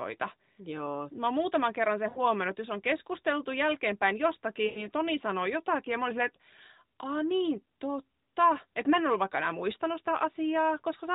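At 2.10 to 2.21 s and again at 4.66 to 4.88 s, lost AMR speech frames cut out about 60 ms and 100 ms of speech. The decoder repeats the last good pitch and vocal tract settings at falling gain, so the speech smears into a drawn-out buzz that fades. On a spectrogram, the harmonics flatten into steady horizontal bands that dim toward silence, all below 4 kHz from the narrowband codec. The waveform shows the amplitude tapering before the speech resumes, briefly weak.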